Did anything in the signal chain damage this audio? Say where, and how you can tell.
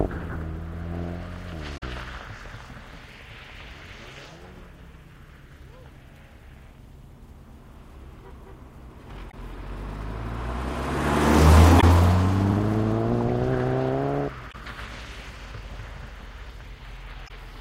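Yes, at the codec stage: damaged data in a compressed stream. Brief blips break the audio at 1.77–1.83 s, 9.30–9.34 s, 11.79–11.84 s, 14.50–14.55 s and 17.26–17.31 s, each about 45 to 60 ms. Corrupted frames decode as garbage until the decoder resyncs on a valid header.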